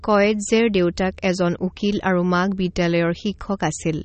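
This speech clip carries plainly audible MP3 compression damage from start to finish. Nothing survives above about 8.4 kHz, a hard ceiling that fits a low bitrate near 32 kbps. Weak frequency components flicker in and out from frame to frame, which gives a watery, swirling texture and chirpy s sounds, and onsets smear. That frame-by-frame swirl is what separates likely MP3 coding from a plain low-pass filter, which would dull the top end without any warble.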